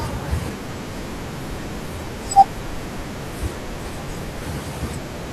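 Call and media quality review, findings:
No faults found in this call and media quality review.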